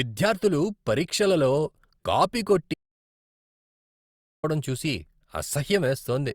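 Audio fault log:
2.74–4.44 s, audio dropout to silence: just after "పరీక్షలలో కాపీ" the speech cuts off mid-flow and the signal falls to silence, with no room tone or background hiss underneath, for about 1.7 s before the voice resumes abruptly mid-phrase. Whatever was spoken across that stretch is simply missing. The silent gap points to the input feed being lost, likely through a disconnected device, a failed link or an accidental mute, while recording carried on writing empty samples.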